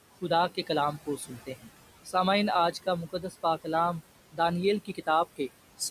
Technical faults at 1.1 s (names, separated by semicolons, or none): noise suppressor artifacts; speech cut by the noise suppressor